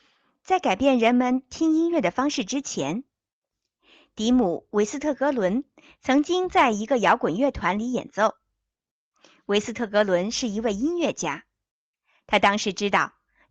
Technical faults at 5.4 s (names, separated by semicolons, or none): none